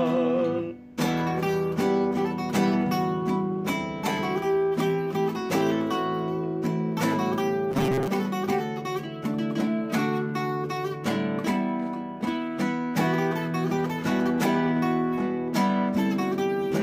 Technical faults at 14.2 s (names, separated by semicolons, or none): none